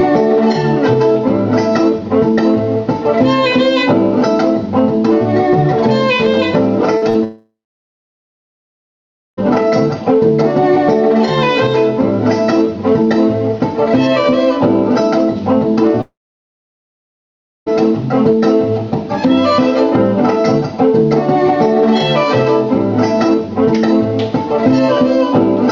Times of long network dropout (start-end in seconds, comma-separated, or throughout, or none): 7.24-9.39, 16.01-17.68